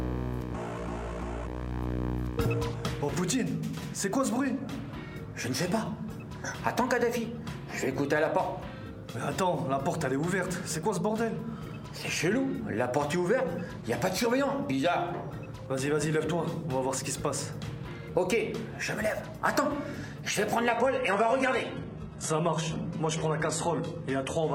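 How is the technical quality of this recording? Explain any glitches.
One glitch appears near the end. From 20.69 s to 24.55 s, the adaptive stream drops to a lower bitrate. A slowed connection made playback switch seamlessly to a leaner encoding, which points to a change from 96 kbit/s AAC-LC to 16 kbit/s HE-AAC. Treble turns thin with heavier artefacts, and a spectrogram shows everything above 11.8 kHz abruptly cut off.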